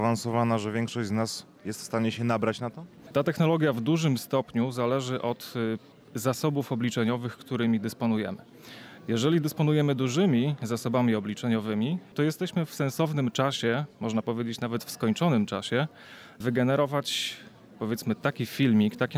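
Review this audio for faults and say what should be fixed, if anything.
No faults; nothing needs fixing.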